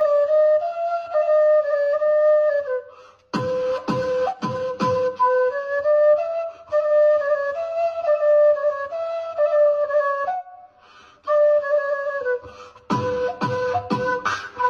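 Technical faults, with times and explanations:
Throughout: channel delay (comb filtering). One channel arrives roughly 10 ms behind the other, and summing them to mono cancels their shared content at regularly spaced frequencies, starting around 50 Hz. The resulting fixed notches leave the whole clip hollow and phasey.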